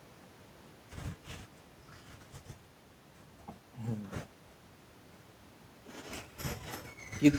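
No technical faults are audible.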